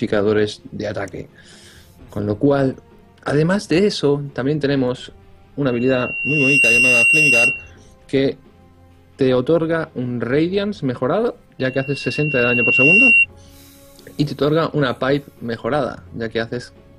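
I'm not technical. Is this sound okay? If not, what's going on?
No. There is loudspeaker feedback squeal from 5.66 to 7.71 s and from 11.59 to 13.26 s. A microphone is picking up its own speaker. A shrill 2.8 kHz tone swells over a second or so. The second squeal is louder.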